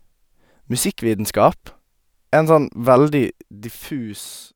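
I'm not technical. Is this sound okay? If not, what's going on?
Yes, this one's fine, and there's nothing wrong here to worry about.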